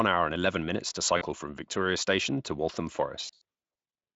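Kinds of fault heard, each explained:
VoIP packet loss concealed by the speech codec: Lost packets made the decoder extend its last pitch and filter at falling gain. At 1.17 s, 40 ms turns briefly into a buzzy tone or coloured noise. From 3.25 to 3.41 s, scattered losses up to 80 ms smear the speech into a weak buzzy tone or coloured noise.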